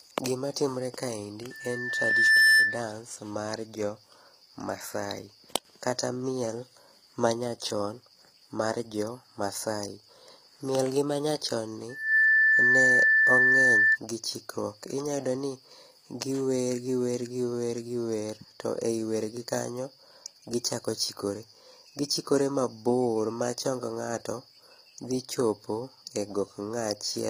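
Speech clip, and the top end sounds gritty and metallic throughout, with nothing above about 15.5 kHz, likely HE-AAC compression at a low bitrate around 24 kbps. There's also loudspeaker feedback squeal, a 1.8 kHz tone sitting about 10 dB over the speech. It swells over roughly a second from 1.50 to 2.89 s, between "timore kaendi" and "mar jo", and rises faster, in about a third of a second, from 11.89 to 13.98 s, between "gi manyachon ni" and "gi chikruok".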